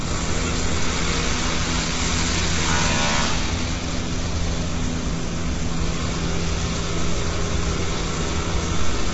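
A recording of sounds carries heavy low-delay AAC compression throughout, with a grainy, rough texture that points to about 16 kbps, likely AAC-ELD; a spectrogram shows nothing above 7.7 kHz.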